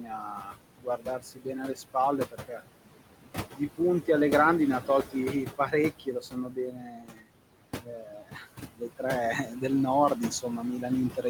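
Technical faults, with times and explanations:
Throughout: noise suppressor artifacts. The room noise, sitting only about 9 dB under the speech, is pushed down by about 18 dB frame by frame, so the noise sinks in pauses and swells under speech. On a spectrogram the background shows as patchy, flickering blotches between syllables.
0.00–2.62 s, 3.51–4.08 s, 4.80–5.15 s, 5.46–7.29 s, 7.82–9.02 s, 9.45–9.63 s: speech cut by the noise suppressor. Quiet consonants and word tails are mistaken for noise and dipped by about 16–19 dB (only about 7 dB at 9.45 s), so they sound swallowed. The longest losses come in the first and fourth spans, totalling around one and a half seconds and about a second. The waveform shows clipped-off word endings, and the spectrogram shows missing high-frequency consonant energy.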